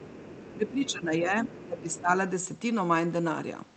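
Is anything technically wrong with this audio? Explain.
Yes, there are two echo-canceller problems here. First, the other side's voice leaking through: from 0.0 to 0.7 s, 0.87 to 0.92 s, 1.48 to 1.66 s and 1.95 to 2.0 s you can hear a faint second voice, roughly 20 to 25 dB under the talker. It's most likely loudspeaker playback getting back into the mic that the canceller didn't fully remove.

Second, speech suppressed in double talk: from 0.54 to 1.4 s and again from 1.66 to 2.09 s, the talker's level dips by up to about 10 dB and then about 15 dB. That's likely the canceller losing track while both sides overlap and turning everything down. The Opus call path itself carries the audio up to about 8 kHz.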